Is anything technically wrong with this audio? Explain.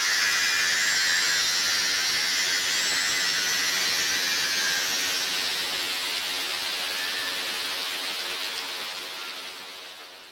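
Yes. The audio has one fault, and it runs from start to finish.

Planar audio read as interleaved, throughout the clip. Each block of roughly 21.77 ms stores all its left-channel samples followed by all its right-channel samples, but playback treats them as alternating left-right pairs. Each block is therefore squeezed into two half-length copies, left then right, each sped up by a factor of two, or 12 semitones. Because these blocks are so short, what you hear is a robotic buzz repeating at about 45.9 Hz rather than a clear octave jump, though the overall pace of the sound is unchanged.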